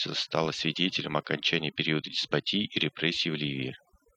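From start to finish the speech carries overdone noise removal: a noise reducer pushed so hard that any frequency band sitting near its noise estimate gets cut almost to nothing, taking the softer parts of the voice with it. The background collapses into near silence dotted with twinkling specks. On a spectrogram the gaps show as dark voids sprinkled with isolated bright dots, and the harmonics look patchy and torn.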